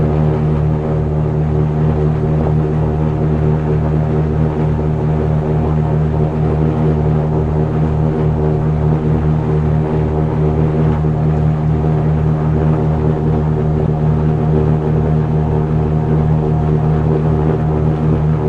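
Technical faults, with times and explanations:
Throughout, MP2 compression: the top end sounds dull, and the remaining bands carry a plainly audible gurgling, granular roughness. This is likely MPEG Layer II coding at a rate that fits about 80 kbps, which leaves too few bits for the upper sub-bands. Unlike burbling, it never lets up.
2.41–2.47 s and 13.78–13.88 s, DAB burbling: brief bursts of noise blips in single sub-bands, across 7 and 6 frames. Reception bit errors at roughly 0.2% and 0.1% got past error correction and corrupted samples. These isolated bursts stand apart from the steady compression grit.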